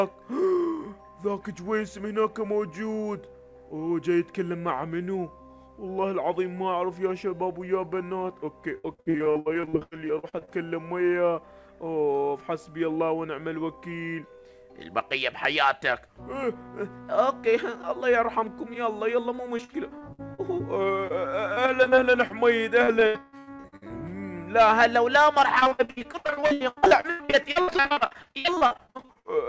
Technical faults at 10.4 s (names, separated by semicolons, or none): repeated packet loss (robotic sound)